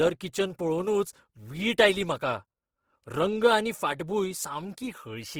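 This speech clip sounds rough and grainy throughout, with a noisy, sandy texture on the voice but little swirl, and content still reaching about 20.4 kHz. That points to Opus compression, likely in its CELT music mode at a starved rate near 16 kbps, filling under-funded bands with noise.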